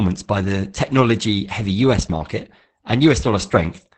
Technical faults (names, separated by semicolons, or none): Opus voice compression